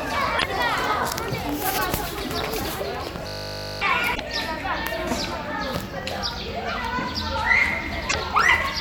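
A recording of everyday sounds with two kinds of trouble. Damaged data in a compressed stream shows up as short glitches at 0.35 to 0.44 s, 4.12 to 4.21 s and 8.06 to 8.16 s, where the decoder misreads corrupted frames and has to regain sync. Between 3.27 and 3.81 s there's a system hang loop: one 20 ms slice repeats, giving a steady 50 Hz buzz while the machine stalls, and about half a second of real audio is lost.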